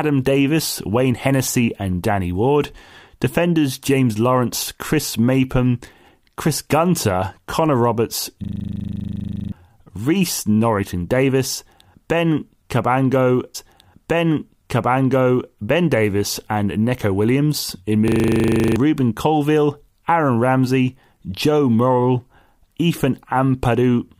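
From 8.44 to 9.52 s a system hang loop takes over: the machine stalls while the sound hardware keeps replaying one 40 ms slice of its buffer, 27 times at 25 per second, giving a rigid buzzing stutter. Unlike a dropout, there is no silence, yet about a second of speech never arrives.

From 13.54 to 15.54 s a stream segment is repeated. The player queues the same stretch twice, so roughly two seconds of speech replay intact after a small blip at the jump back. This is a long, natural-sounding repeat, not a rapid mechanical stutter.

The same hang loop returns at 18.08 to 18.76 s, with 17 repeats of a 40 ms slice and about 0.7 s of speech lost.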